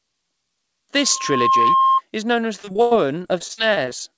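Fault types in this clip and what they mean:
Loudspeaker feedback squeal: From 0.97 to 2.01 s a single 1.1 kHz tone swells over about half a second and sits around 5 dB above the speech. The microphone is re-capturing its own loudspeaker, and the loop gain exceeds one at that frequency.
Repeated packet loss (robotic sound): From 2.56 to 4.14 s the speech turns choppy with pieces missing. Fourteen gaps occur, the longest 95 ms. Each is patched by stretching the previous sound, so about a quarter of this stretch is filled-in audio rather than real speech.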